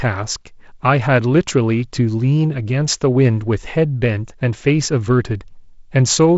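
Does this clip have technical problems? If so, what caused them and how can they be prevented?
No, no technical problems found.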